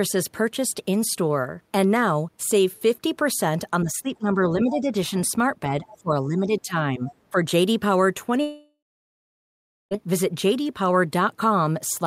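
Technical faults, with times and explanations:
3.83–4.96 s, 5.67–7.13 s and 7.31–7.46 s, speech suppressed in double talk: the echo canceller likely could not tell the talker from loudspeaker echo while both sides spoke, so it turned everything down. The talker's speech dips by roughly 10 to 15 dB, deepest around 5.67–7.13 s.
5.88–5.97 s and 7.09–7.15 s, other side's voice leaking through: the echo canceller likely left some of the far-end loudspeaker sound in the microphone signal. Brief scraps of a second voice slip through, roughly 25 dB below the talker.
8.41–9.93 s, long network dropout: about 1.5 s of audio likely never arrived. The receiver extends the last sound as a fading buzz or hiss for a few tenths of a second, then about 1.1 s of silence follows before the speech resumes with that stretch missing.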